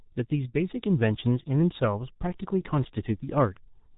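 From start to finish the speech carries heavy G.723.1 codec damage. Nothing above 3.8 kHz survives, so the audio sounds muffled and boxy, and the coarse, slowly updated voice model leaves vowels hoarse and consonants smeared together. The degree of loss fits a rate near 6.3 kbit/s. On a spectrogram the energy stops at a hard ceiling around 3.8 kHz, with blurred, blocky formant tracks changing in coarse steps.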